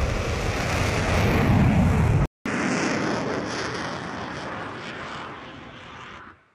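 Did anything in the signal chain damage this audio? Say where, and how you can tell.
Yes. An input switched to a poorer device, from 2.26 s to the end. At the switch the sound drops out for 200 ms, then returns duller, with nothing above 10.6 kHz, about 5 dB quieter, and carrying a new noise floor roughly 40 dB below the signal. This points to the capture stage: the system likely changed to a different microphone or input device mid-recording, one with a narrower passband, its own gain and its own background noise.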